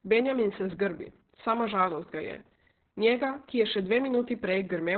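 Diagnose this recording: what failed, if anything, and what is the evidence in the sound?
The codec stage failed. Heavy Opus voice compression runs through the whole speech clip. Nothing reaches above 4.3 kHz, so the speech is muffled and narrowband, with a hoarse, slightly robotic edge where the linear-prediction coder quantises the excitation coarsely. That fits SILK at a very low bitrate, around 6 kbps, with long frames. On a spectrogram, energy stops flat at 4.3 kHz from start to finish, and the harmonics below look smeared and grainy.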